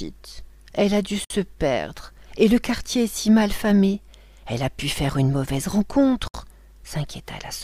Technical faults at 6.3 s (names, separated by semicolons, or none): gap at a join of encoded pieces